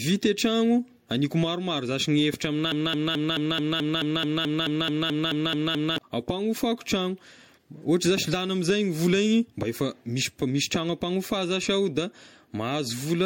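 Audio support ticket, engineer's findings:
Generation loss, whole clip: swirly, hollow, smeared attacks, nothing above 16.6 kHz. Sounds like MP3 at about 64 kbit/s, likely re-encoded a few times, each pass requantising on a shifted frame grid so artefacts stack.

Broken-record loop, 2.72 to 5.98 s: a 216 ms chunk repeats back to back, about 15 times, before "ampanofako tragno". Likely a stalled player or stream resending its last buffer; the audio meant for that stretch is gone.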